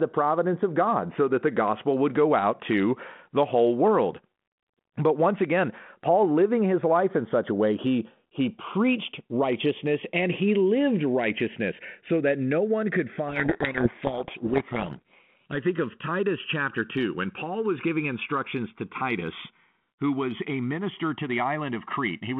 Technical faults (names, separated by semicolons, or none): channels drifting apart; codec payload misread